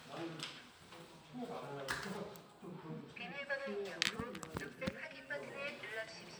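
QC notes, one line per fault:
No faults are heard anywhere in this clip of sounds. Nothing needs attention.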